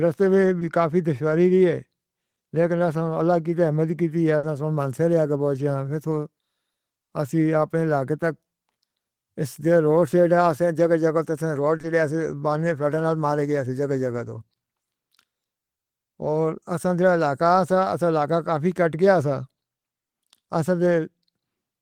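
At 0.59 s there's a short concealed packet loss: about 20 ms never arrived, so the receiver stretched the preceding sound over the hole, leaving a brief smear. At 4.37 s comes a burst of packet loss, roughly 60 ms gone; the last sound is held and fades as a buzz or hiss, then speech picks up further along. Two more short concealed losses follow back to back at 11.77 s and 11.81 s, each about 20 ms, giving a quick wobble.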